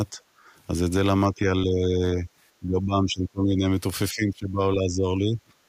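Speech suppressed in double talk appears in this speech recording at 0.10–0.19 s, 1.34–1.48 s, 1.64–2.29 s, 2.60–3.65 s and 4.12–5.40 s. The voice dips by anywhere from a few decibels to roughly 20 dB, deepest around 2.6–3.7 s. This is likely an echo canceller mistaking simultaneous talk for loudspeaker echo and attenuating everything. Background gated by the echo canceller occurs at 0.47–0.52 s, where the room sound drops by about 6 dB for around 50 ms. The canceller clamps the microphone while the far end plays, then releases it so the ambience returns.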